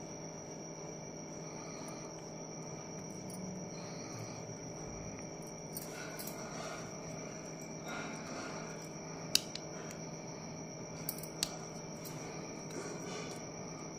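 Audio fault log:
No fault can be heard anywhere in this clip. There is nothing to log.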